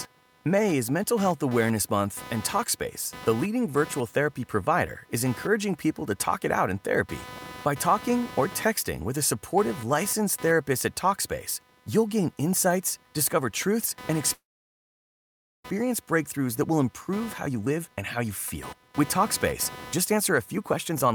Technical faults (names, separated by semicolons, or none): computer activity noise; call audio freeze; jitter buffer speed-up